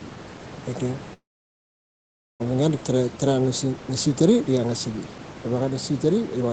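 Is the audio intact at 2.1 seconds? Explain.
No. At 2.1 s the audio is in the middle of a call audio freeze running from 1.13 to 2.42 s. The last sound before it is stretched into a brief fading buzz or hiss, then the line goes silent for about 1.18 s until the sound picks up exactly where it left off. The likely cause is packets held up in transit, draining the jitter buffer. Nothing is lost, but the rest of the clip arrives about 1.26 s late.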